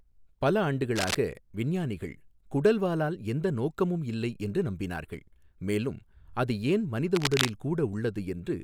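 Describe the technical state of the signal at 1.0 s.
A brief burst of scratchy, rustling noise sits over the speech from 0.95 to 1.16 s, only about 5 dB below it. This is cable scratch noise, likely from a worn cable or connector being moved, its contact resistance fluctuating rapidly and injecting irregular noise bursts.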